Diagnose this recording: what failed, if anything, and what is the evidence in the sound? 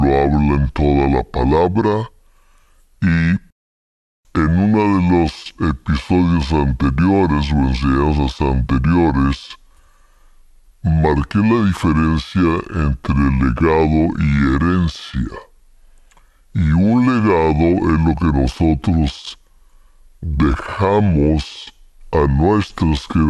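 Wrong sample rate at playback: the speech runs slow and low throughout, at 0.726 times speed and 5.55 semitones down, which fits 44.1 kHz audio clocked out unconverted at 32 kHz.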